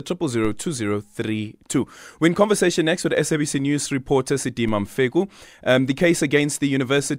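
A low thump cuts into the speech at 0.45 s and again at 4.68 s, each a brief dull knock under the talking, which carries on unchanged. Both are DC steps: the waveform's zero line jumps suddenly by about -22 dBFS, then drifts back over a fraction of a second as a very low high-pass, around 2 Hz, drains the offset away. The abrupt jump, not the slow return, is what produces the thump.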